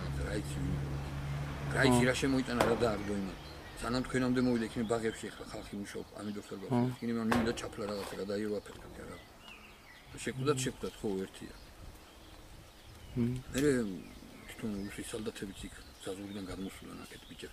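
No technical faults can be heard anywhere in the recording; the signal stays steady and intact throughout.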